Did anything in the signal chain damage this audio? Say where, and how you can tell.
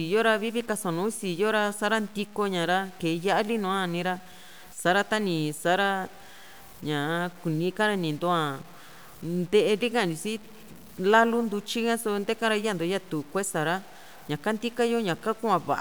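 Yes. Across the whole clip the speech carries a grainy, buzzing distortion that rises and falls with the speech itself, and the quietest tails and pauses crumble or cut to silence rather than fading smoothly. That points to low bit depth without dither, most likely introduced at a sample-format conversion stage where the samples were truncated to about 7 bits. With no dither, the error tracks the signal, sitting only around 25 dB below it.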